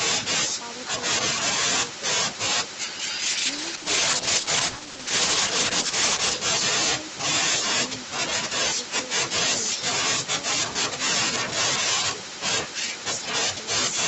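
Echo with no canceller runs through the whole recording, from the start to the end. The far end is playing the call out loud on a loudspeaker, its microphone picks that playback up, and nothing strips it out, so the speech returns after the network round trip. Each phrase is trailed by a faint, thin copy about a third of a second later, sitting about 28 dB below the direct speech.

A call bitrate drop runs from 3.26 s to 6.41 s. The connection's bandwidth estimate fell, and the Opus encoder was pushed down to a far lower rate, with the sound pointing to a fall from around 32 kbps to about 9 kbps. It stayed at that floor for about 3.1 s. The coarser coding makes the speech rough and watery, and the top end, normally reaching 8 kHz on this path, sounds duller until the rate climbs back.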